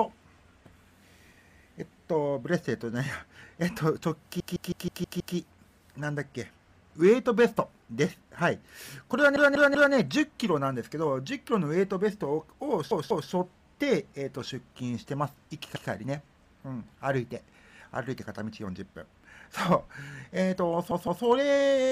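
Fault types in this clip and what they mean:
Repeated frames: A short block of the compressed stream plays again and again, so the sound stutters in place before moving on. Each repeat adds its full length to the clip. The blocks run 128 to 192 ms, which fits runs of four to six frames. The worst, from 4.40 s, loops six extra times and adds 960 ms. Shorter stutters start near 9.36, 12.91, 15.76 and 20.91 s.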